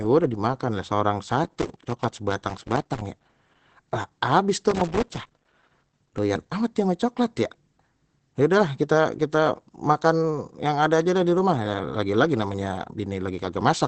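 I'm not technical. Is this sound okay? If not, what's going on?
No, there are two problems. The first runs through the whole clip: the voice sounds muffled and hoarse, and everything above about 8.6 kHz is simply gone, so there's no crisp top end at all. That's likely Opus compression squeezed hard, with the encoder switched into its speech mode. To save space it throws away the high frequencies and only roughly rebuilds the rest.

The second is loose connector crackle, which comes in two bursts: from about 1.44 to 3.24 seconds, and again from about 4.70 to 6.18 seconds. It sounds like scratchy, irregular crackling over the voice. That happens when a worn or dirty plug or socket keeps losing and regaining contact as it moves, chopping the signal on and off.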